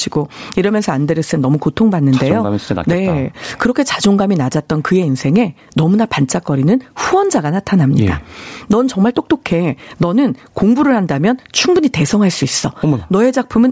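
Speech runs through a call's microphone processing, with nothing above 8 kHz, and shows gain pumping across the whole clip, with the level swinging by around 15 dB, so loud and quiet passages sit squashed together. The likely cause is gain set far too high with a fast limiter pulling it down on every peak. A noise gate would instead mute the gaps.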